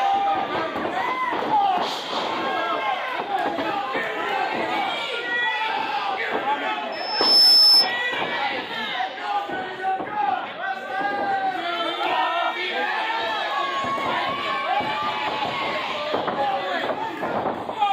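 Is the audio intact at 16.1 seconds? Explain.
Yes, the audio is intact at 16.1 seconds, with no audible fault at that moment.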